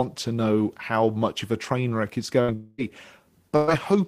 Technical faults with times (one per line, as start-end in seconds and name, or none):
2.41-2.51 burst of packet loss
2.54-2.81 long network dropout
3.56-3.70 burst of packet loss